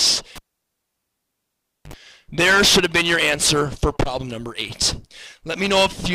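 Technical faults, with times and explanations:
0.36–1.94 s, cable pulled and plugged in: there's a pop as the live lead comes out, about 1.5 s of near silence, a 58 ms burst of 50 Hz mains buzz while only the tip makes contact, then another pop as the sound comes back.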